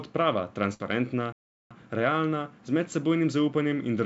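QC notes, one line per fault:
0.74–0.82 s, burst of packet loss: about 57 ms of concealment continues and fades the preceding sound into a held buzz or hiss, then speech resumes roughly 60 ms further on. Unlike a stall, the gap is filled, not silent, and content is skipped.
1.32–1.71 s, playback stall: the output drops to silence for about 0.38 s, likely because the player ran out of buffered data or its thread was blocked. No fading tail fills the gap, which sets it apart from the loss at 0.74 s.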